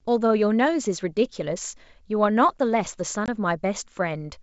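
Speech coded as G.722 wideband, clear up to 7 kHz, has packet loss on an ADPCM call. A 20 ms hard-edged silence at 3.26 to 3.28 s fits a single lost packet. Unlike a simple dropout, the sound then returns briefly mis-levelled or distorted while the decoder's predictor and step size resynchronise.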